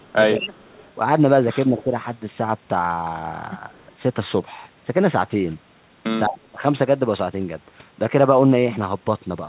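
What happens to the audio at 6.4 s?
From 6.28 to 6.63 s the speech sinks sharply, by about 35 dB at its deepest. This is speech suppressed in double talk, likely from the echo canceller turning down its own talker along with the loudspeaker echo. Between 6.31 and 6.37 s, an echo leak adds a faint copy delayed by 209 ms. It sits about 15 dB below the speech, probably because the canceller let some loudspeaker pickup through.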